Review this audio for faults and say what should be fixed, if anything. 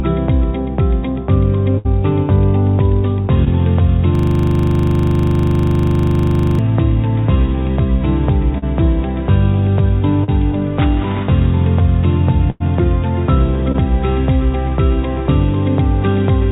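Burst of packet loss at 1.78–1.87 s and 12.50–12.62 s: runs of packets arrived too late or not at all, about 60 ms and 100 ms. The receiver stretched the last sound and faded it, so each spot is a dying buzz or hiss before the audio jumps ahead past the lost section. Prevent this with a deeper adaptive jitter buffer and forward error correction or redundancy on the link.

Short concealed packet loss at 3.45–3.48 s, 8.58–8.64 s, 10.24–10.30 s and 13.72–13.76 s: single gaps of about 20 to 40 ms never reached the decoder in time. The receiver patched each one by extending the preceding sound, which shows up as a brief smear or wobble, and a short transient can disappear. Prevent this with packet-level redundancy and better network quality of service.

System hang loop from 4.15 to 6.59 s: the computer or audio driver stalled while the sound hardware kept replaying its ring buffer. A single 40 ms piece repeats about sixty times, producing a rattling 25 Hz stutter-buzz for nearly two and a half seconds. 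Prevent this by finding the driver or scheduling stall that blocks the audio thread, and muting the output when buffer refills stop.

The call path's cut-off at 4 kHz is expected behaviour for a 64 kbps G.711 mu-law link, not a fault.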